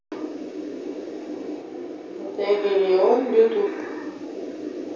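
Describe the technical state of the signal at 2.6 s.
At 2.6 s the sound is in a switch to a distant microphone (1.62–3.66 s), likely from the close mic dropping out: roomy, hollow, thinner bass, about 5 dB quieter, with visibly smaller waveform and faint room noise filling spectrogram gaps.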